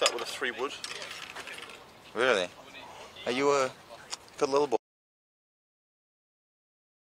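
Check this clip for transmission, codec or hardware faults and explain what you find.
One fault is present: an audio dropout to silence. At 4.77 s the sound stops abruptly, in mid-flow. From there to the end of the clip, about 2.3 s, there is complete silence. No room tone or background noise remains underneath. The likely cause is a lost input, such as a disconnected device, a failed link or an accidental mute. The recorder kept writing silence. Whatever occurred during those final seconds is gone.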